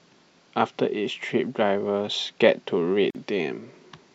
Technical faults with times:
3.10-3.15 gap at a join of encoded pieces

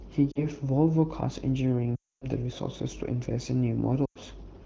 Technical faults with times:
0.32-0.45 lost AMR speech frames
1.96-2.26 lost AMR speech frames
4.05-4.18 lost AMR speech frames

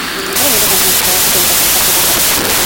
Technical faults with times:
0.00-2.66 wrong sample width

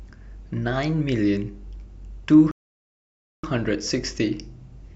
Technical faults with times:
2.51-3.44 rebuffering stall

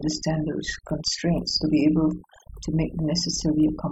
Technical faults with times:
0.00-3.91 overdone noise removal

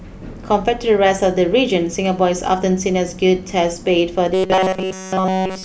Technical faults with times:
4.34-5.64 robotic sound from repeated short buffers

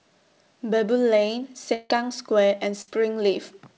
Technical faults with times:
1.74-1.92 long network dropout
2.82-2.89 burst of packet loss

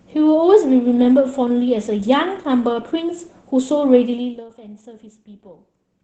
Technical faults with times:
0.00-6.04 Opus voice compression

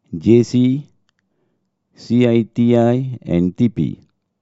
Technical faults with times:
none

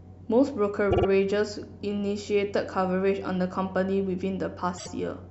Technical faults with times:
0.90-1.06 repeated frames
4.77-4.88 repeated frames

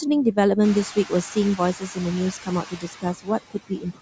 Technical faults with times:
0.00-4.01 noise suppressor artifacts
0.63-0.80 noise suppressor catching up
2.43-4.00 speech cut by the noise suppressor

